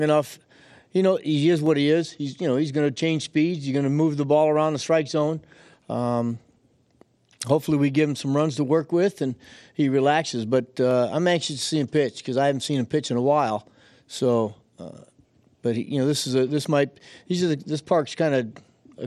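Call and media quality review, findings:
Dropped samples, speech, three single clicks: 1.66 s (after "know he is"), 10.91 s (before "I'm anxious to see"), 17.49 s (after "this might these are"). Likely sample-level stream loss, a fraction of a millisecond each, so the waveform jumps to a later value, leaving a sharp tick with nothing audibly missing.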